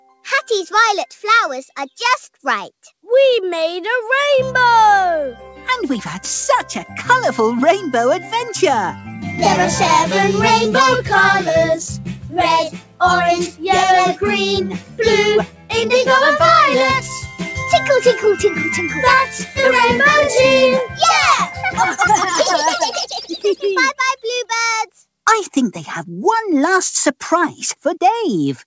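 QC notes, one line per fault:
0.01–0.24 s, 12.15–12.34 s, 12.7–13.0 s, 14.79–14.99 s and 15.47–15.7 s: sound cut by the noise suppressor. In each stretch of roughly 0.2 to 0.3 s, the suppressor mistakes the sound for noise and pulls it down by about 10 to 12 dB. The sound sinks in level but never goes silent, which sets it apart from a dropout.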